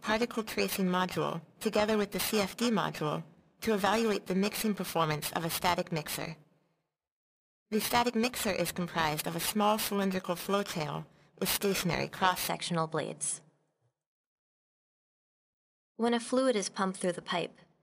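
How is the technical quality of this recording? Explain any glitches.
The recording carries one clear fault: periodic clock jitter from the start to 12.48 s. Throughout that span the sound has a rough, metallic edge, harshest on high-frequency content and absent in silent gaps. Interference wobbling the converter's clock at around 2 kHz puts sidebands that far above and below every component.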